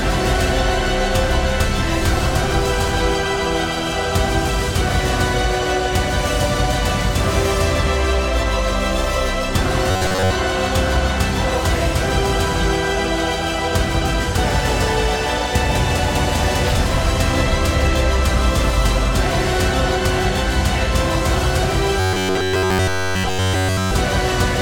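Robotic sound from repeated short buffers at 9.91–10.33 s and 22.00–23.91 s. Short chunks, likely about 10.7 ms, repeat, forcing a rigid 93.8 Hz buzz. The second is fully robotic.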